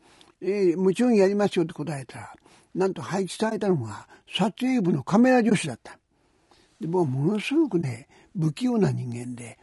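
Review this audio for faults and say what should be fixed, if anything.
Low-delay AAC compression throughout: the speech sounds rough and grainy, with noise between the harmonics and a synthetic-sounding top band. The likely cause is AAC-ELD's short frames at a bitrate around 32 kbps, which leave too few bits to resolve pitch detail.

AAC frame loss with muting at 3.49–3.52 s, 5.49–5.52 s and 7.81–7.84 s: each time, one roughly 20 ms frame's spectrum was zeroed, so overlapping windows fade the sound out and in as a brief dip.

To prevent this, raise the bitrate or use a higher-quality codec mode, and add packet-loss protection such as redundancy or concealment on the transport.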